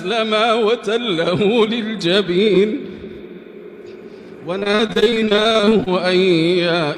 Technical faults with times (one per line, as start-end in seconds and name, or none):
4.59-5.88 repeated packet loss (robotic sound)